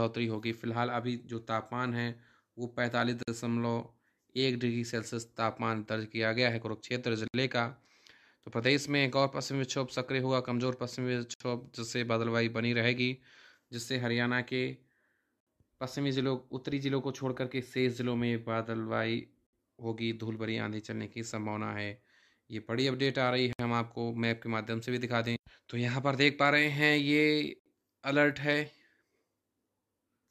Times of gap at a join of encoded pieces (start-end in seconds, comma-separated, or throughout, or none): 3.23-3.28, 7.28-7.34, 11.34-11.40, 15.40-15.47, 19.47-19.53, 23.53-23.59, 27.59-27.66